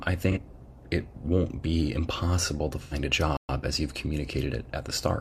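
At 0.31 to 0.38 s and again at 2.82 to 2.94 s, the speech turns briefly smeared and noisy: AAC frame loss with concealment. The decoder fills the gaps from the last good spectrum. The first patch lasts about 43 ms, fitting one lost frame; the second, about 85 ms, fits two.

From 3.37 to 3.49 s the speech cuts to silence for 120 ms mid-flow, then resumes. This is a playback stall, likely the player running short of data or its output thread being blocked until it recovered.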